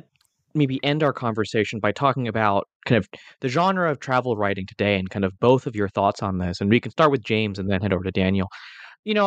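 No technical faults can be heard anywhere in the recording; the signal stays continuous and stable throughout.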